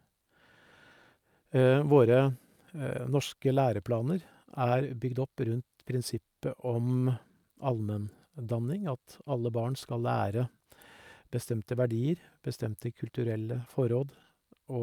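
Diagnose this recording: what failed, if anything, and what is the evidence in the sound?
Nothing failed in this recording, and the sound gives no evidence of any fault at any stage.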